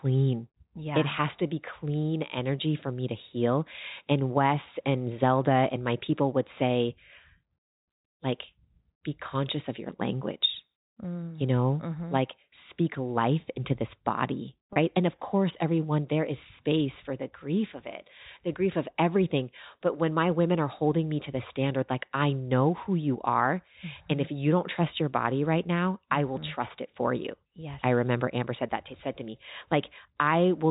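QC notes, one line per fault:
14.73–14.76 s, packet loss with pitch repetition: about 30 ms dropped, which fits a single lost packet, bridged by repeating the last pitch period, so the sound briefly holds as a buzzy tone. The waveform shows identical repeated cycles; the spectrogram shows frozen harmonic stripes under the telephone band's 4 kHz ceiling.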